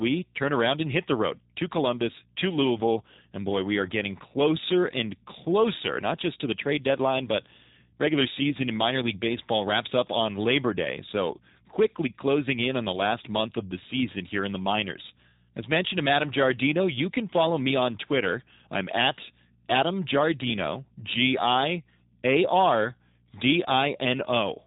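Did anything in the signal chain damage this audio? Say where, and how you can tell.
Yes, at the codec stage: a G.729 codec runs through the whole speech clip. Nothing above about 3.8 kHz survives, and the voice sounds plainly rough and synthetic, which fits an 8 kbit/s coder rebuilding each 10 ms frame from a vocal-tract filter, pitch predictor and sparse pulses.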